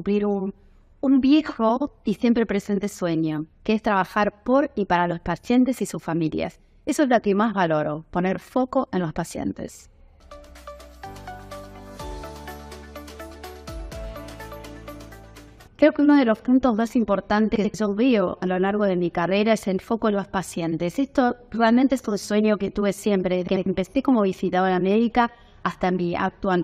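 Frames out of order garble the audio at 1.76, 17.55 and 23.47 s. Adjacent blocks of about 46 ms, then 93 ms, swap places, producing brief flutter.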